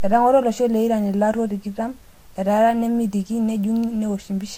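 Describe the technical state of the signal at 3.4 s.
At 3.4 s the speech carries the same degradation heard throughout: nothing above 16.6 kHz, with smeared, warbly artefacts from two codec stages layered together. This is likely transcoding between lossy codecs, consistent with HE-AAC then Vorbis near 48 kbit/s. A spectrogram shows a hard ceiling and blotchy high bands.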